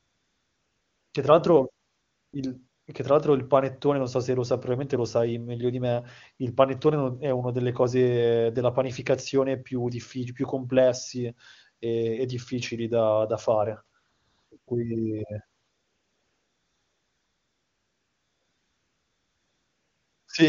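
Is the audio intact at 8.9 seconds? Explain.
Yes, the speech at 8.9 seconds is intact, carried cleanly by the AMR wideband (HD Voice) codec at its top rate of 23.85 kbit/s with no fault at that moment.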